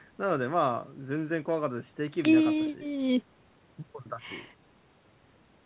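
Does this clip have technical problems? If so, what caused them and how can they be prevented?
No, this clip has no technical problems.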